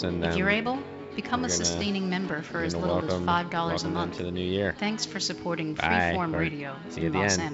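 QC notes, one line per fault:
No faults found; the audio carries the expected call-path band limit, with nothing above 8 kHz, consistent with a wideband G.722 link.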